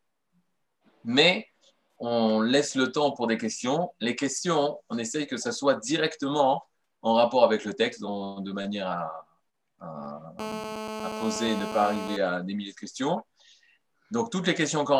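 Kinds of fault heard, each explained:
GSM phone buzz: A nearby 2G phone on a call pulses about 217 times a second, and the audio circuit rectifies it. A hard, raspy buzz results, about 8 dB below the sound.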